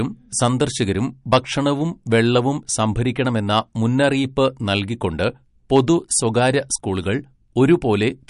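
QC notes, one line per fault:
Throughout: MP3 compression. The audio sounds watery and swirly, and nothing reaches above about 10.6 kHz, so sibilants lose their top and chirp metallically. This plainly audible damage is likely from a low-bitrate MP3 encode around 47 kbps, where the encoder trims the treble and lets weak frequency lines flicker between frames.
1.33–1.38 s and 5.76–5.80 s: hard clipping. Both peaks break into a short harsh crackle, stronger at 1.33 s. The signal exceeded what a stage could pass, by about 7 dB and about 3 dB, so the peaks were cut flat and gained high harmonics.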